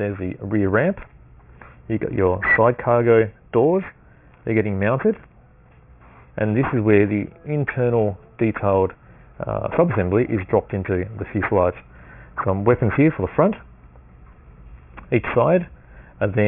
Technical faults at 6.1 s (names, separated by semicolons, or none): aliasing